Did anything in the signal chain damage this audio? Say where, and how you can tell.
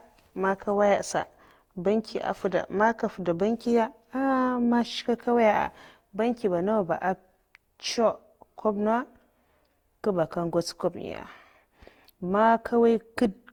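Yes, at the codec stage, throughout the speech: a swirly, hollow, smeared sound with blurred attacks, likely from generation loss, with the audio re-encoded around seven times in what sounds like a 64 kbit/s Opus chain. Bandwidth still reaches 20.1 kHz, yet it sounds worse than that bitrate alone would explain.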